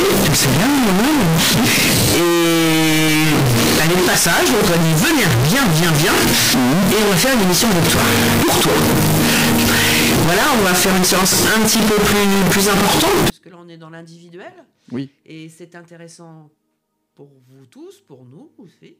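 From the start to about 13.3 s the audio turns into a loud, harsh, near-square blast, likely float read as integer: 32-bit float samples decoded as 32-bit integers.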